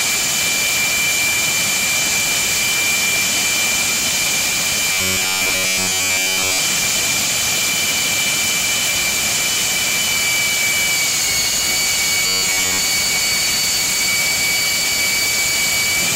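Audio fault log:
4.92–6.59 s and 12.26–12.80 s, robotic sound from repeated short buffers: the audio turns into a rigid, metallic buzz at 93.8 Hz, fully in the first stretch and for most of the second. That pitch points to a roughly 10.7 ms chunk looping because fresh audio likely wasn't arriving in time.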